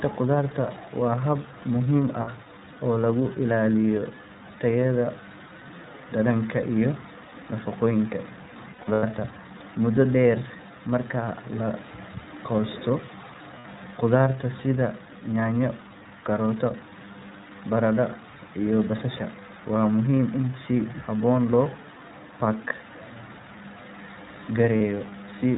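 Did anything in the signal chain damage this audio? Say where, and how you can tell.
Yes. At the codec stage, the whole clip has been through the iLBC codec. Nothing reaches above 4 kHz, and the speech has a rough, slightly synthetic edge from coding each frame's excitation on its own. The damage is plainly audible. The character fits iLBC's 30 ms frame mode at about 13.3 kbps, and the hard narrowband ceiling and rough, synthetic texture throughout point to this codec rather than a later filter.

At the network stage, there are lost iLBC frames at four places: 2.21 to 2.29 s just after "hab muhiim", 8.73 to 9.03 s, 13.58 to 13.66 s, and 24.78 to 24.81 s. Each gap sounds like a held, faintly buzzy vowel, where the decoder repeats the last pitch cycle mixed with noise. The 8.73 s event has losses scattered over about 300 ms, with the longest run around 100 ms. The others are 60 ms or 30 ms, consistent with one or two missing packets. 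Speech recovers almost immediately after each gap because iLBC frames decode independently.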